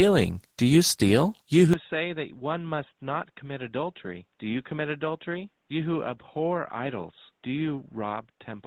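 Opus voice compression runs through the whole clip at 16 kbps in hybrid mode, with SILK predictive coding below and CELT above 8 kHz, in 20 ms frames. The coarsely coded excitation leaves the speech plainly hoarse and faintly robotic.

At 1.73 s the sound turns abruptly dull and boxy, with no gap at the change. It stays that way to the end, losing everything above 3.8 kHz, dropping about 10 dB, and gaining a faint new noise floor. The likely cause is an input switched to a poorer device.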